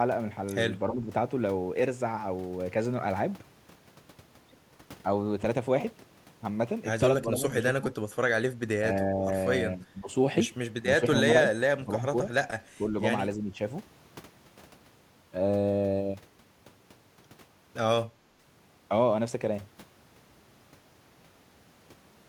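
An echo canceller that likely could not tell this talker from loudspeaker echo while both sides spoke at once pulled the level down, producing speech suppressed in double talk at 0.89–1.06, 7.23–7.85, 8.49–8.53, 9.14–10.09, 10.98–12.12 and 12.75–13.59 s. The speech dips by about 5 dB at the first and last, about 10 dB at the second and third, and about 15 dB in the two longest stretches.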